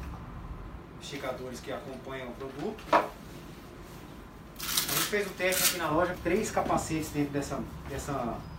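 At 2.86–2.89 s and 6.11–6.15 s, compressed frames are skipped: roughly two, then five, 46.4 ms frames never play, so the sound jumps ahead by about 0.1 s and 0.2 s.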